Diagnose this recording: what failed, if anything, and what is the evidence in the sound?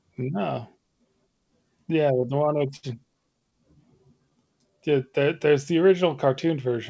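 Repeated stalls (stutter), at the network and jitter buffer stage: between 2.22 and 2.85 s the sound hitches seven times, with the longest gap 67 ms. Packets arrived late, the buffer ran dry, and the receiver stretched the last sound over about 131 ms in total. Nothing is actually lost.

Jitter buffer slow-down, at the buffer stage: from 4.18 to 5.2 s the speech drags at 89% speed, 119 ms longer, with the pitch unchanged. The buffer was rebuilding its reserve by repeating single pitch periods and bits of pauses, which draws the sounds out.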